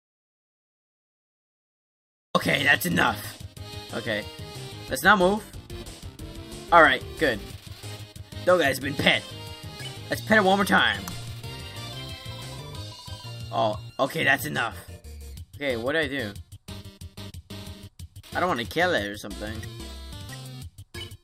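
From 0.0 to 2.35 s the audio is silent with no room tone, an audio dropout to silence already under way at the start, likely a lost input while recording continued.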